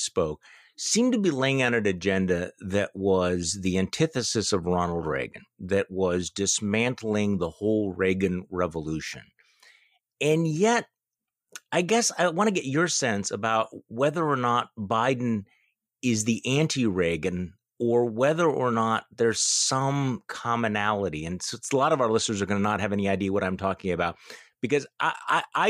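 No technical faults can be heard in this recording.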